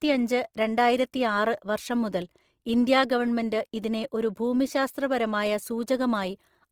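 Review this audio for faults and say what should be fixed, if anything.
Opus compression damage runs through the whole clip and is plainly audible. The speech sounds grainy and rough rather than swirly. The full bandwidth survives, but the upper bands have a noisy, filled-in texture instead of clean detail. The cause is likely Opus in its music mode, keeping each band's energy while starving the fine structure of bits. The grain fits a rate near 24 kbps. Encoding at a higher bitrate would prevent this.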